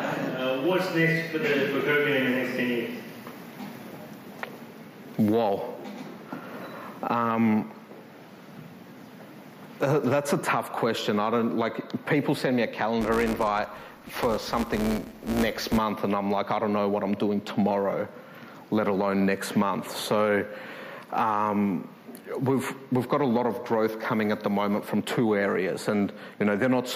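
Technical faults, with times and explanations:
0.64 to 0.73 s and 6.55 to 6.71 s, DAB burbling: short blips of noise in single sub-bands over the programme each time. Weak reception lets bit errors slip past error correction, around a few tenths of a percent, corrupting sub-band samples across 5 and 11 frames.
13.01 to 15.78 s, filter restarted on every block: a steady 172 Hz buzz riding on the sound and tracking its level. Each block restarts from silence with a small transient, and that repeat rate fits a 256-sample block.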